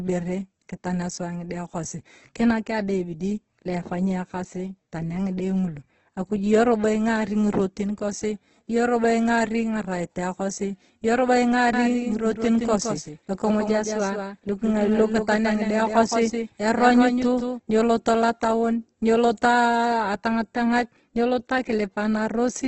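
Throughout, the speech sounds grainy and rough with nothing above 8.1 kHz, likely from heavy Opus compression at a low bitrate, around 12 kbps in CELT mode. From 11.73 s to 17.59 s a doubled audio track appears: an undecayed copy about 5 dB quieter trails by roughly 150 ms, starting abruptly just before "nyieloto lotion ny’oloto aa" and stopping abruptly.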